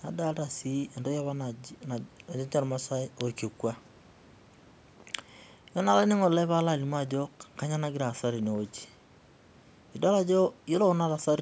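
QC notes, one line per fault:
No faults found; call microphone processing behaves as expected.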